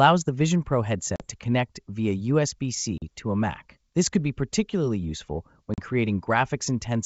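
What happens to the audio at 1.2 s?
Right there you've got packet loss on an ADPCM call, from about 1.16 to 1.27 s. Around 40 ms of audio, roughly a couple of packets, drops out to a hard-edged silent gap. The G.722 decoder's predictor and step size lose track of the sender's, so when the speech comes back on "to connect via" it's slightly distorted before it settles.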